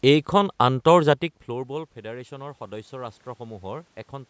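Automatic gain rising runs from 1.47 to 4.25 s. After the talker moves back around 1 s, the input drops by about 17 dB. The gain control then slowly adds about 5 dB, so the speech and room noise swell together.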